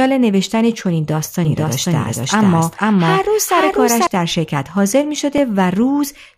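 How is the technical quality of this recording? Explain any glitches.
The recording has two clear technical faults in the speech.

From 1.45 to 4.07 s there is a doubled audio track. A second full-band copy runs about half a second behind at roughly the same level, likely from a second, slower capture path. It sounds like an abrupt echo with no room tail. On a spectrogram, the same patterns appear twice, offset in time.

From 4.71 to 5.82 s there are CD scratch ticks: six short ticks or micro-dropouts, about five per second, the longest about 5 ms. Damage on each disc revolution exceeded error correction, so samples were interpolated or muted. They show as thin vertical lines or brief notches in the waveform.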